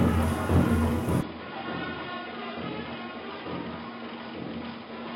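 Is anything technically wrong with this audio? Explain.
Yes. From 1.21 s to the end, the sound abruptly turns duller and quieter, with no gap at the transition. Above 5.1 kHz there is nothing, the level falls by around 10 dB, and a faint new background noise appears, roughly 50 dB below the signal. This pattern is likely an input switched to a poorer device mid-recording: a different, band-limited capture path with its own gain and noise floor replaced the original, giving a boxy, muffled character.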